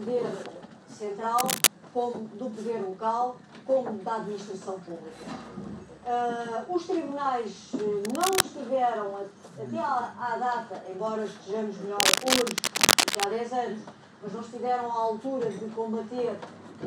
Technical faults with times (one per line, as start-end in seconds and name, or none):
1.38-1.67 cable scratch noise
8.05-8.42 cable scratch noise
12.00-13.25 cable scratch noise